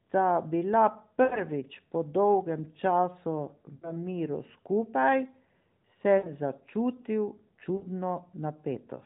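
Lost AMR speech frames at 1.24–1.42, 3.76–3.97, 6.18–6.30 and 7.76–7.86 s: the decoder repeats the last pitch and vocal-tract settings with falling gain, so each gap is a smeared, fading hold of the speech rather than a hard silent dropout, followed by a brief rough recovery.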